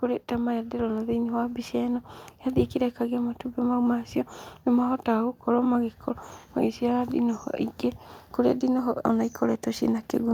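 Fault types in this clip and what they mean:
Automatic gain rising: the automatic gain control judged the input too quiet and slowly raised its gain, so the speech and background swell together by about 4 dB. The rise is gradual, running from 0.28 s to 3.29 s.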